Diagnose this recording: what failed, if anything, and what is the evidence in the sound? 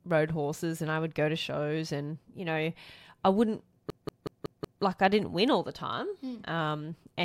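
A system hang loop at the driver or buffer stage: after "you know I wouldn't", one 186 ms slice repeats identically five times, a 5.38 Hz machine-gun stutter from 3.90 to 4.83 s, which fits an 8192-sample ring buffer replayed while the host froze. Unlike packet-loss concealment, the copies are exact rather than smeared, and speech resumes at "I didn't win all" with essentially nothing lost.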